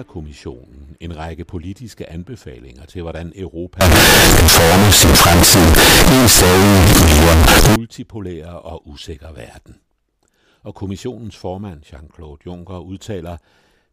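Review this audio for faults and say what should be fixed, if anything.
From 3.81 to 7.76 s, right after "politiske anbefalinger til hvordan", the speech turns into a harsh, very loud roar. The likely cause is signed and unsigned mixed up, which fits 16-bit samples read with the wrong sign convention. That flips the top bit, so every zero crossing leaps across the whole range. Unlike clipping, which only flattens loud peaks, the pauses here are as loud as the speech. Converting with the correct signed or unsigned format declared at every stage would prevent it.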